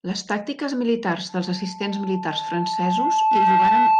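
A steady tone at 875 Hz rises out of this speech recording just after "tàctiques militars", at 1.29 s, swelling over roughly two seconds into a squeal that ends up around 10 dB louder than the speech and continues to the end of the clip. This is loudspeaker feedback squeal: the microphone picked up the loudspeaker it was driving, and at 875 Hz the loop gain exceeded one, so that tone kept reinforcing itself.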